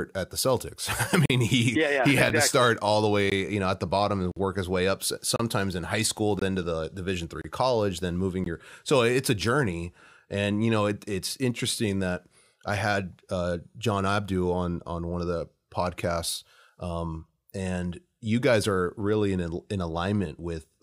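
Gaps between stream segments cut hard-edged silent holes into the speech. They fall at 1.26–1.30 s, just before "he yeah yeah he", then 2.30 s, 3.30 s, 4.32–4.37 s and 5.36–5.40 s. Another comes at 6.39–6.42 s, between "in high school" and "to the". The last two are at 7.41–7.44 s, before "college then moving your", and 8.44 s. They recur about once per second, which fits one-second segments whose timestamps leave gaps that the player fills with silence. The holes last from about 6 to 49 ms. No audio is lost.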